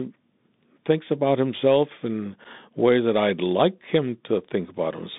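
Bluetooth CVSD headset codec damage runs through the whole speech clip: the sound is confined to roughly 150 Hz to 3.7 kHz, and the coarse one-bit delta coding, consistent with a 64 kbps CVSD link, leaves an audible granular hiss, scratchy sibilants and distortion where loud high content outruns the adaptive step. Unconcealed Bluetooth headset packet loss hits at 2.44–2.46 s, between "thinks about himself in" and "ways that I'd like": about 7.5 ms of audio, apparently a single lost packet, drops out with abrupt edges and no repair.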